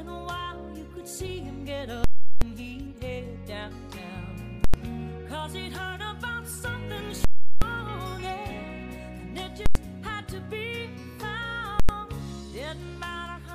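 The sound hits invalid numbers at full scale five times. Longer blocks of about 0.37 s run at 2.04–2.42 s and 7.25–7.62 s, which fits 16384-sample blocks. Shorter blocks of about 93 ms run at 4.64–4.74, 9.66–9.75 and 11.80–11.89 s. In each, a calculation produced invalid values that became the largest positive or negative value, so the output holds flat at one extreme value. The long blocks give a loud pop at each end with silence between. The short ones land as single bangs.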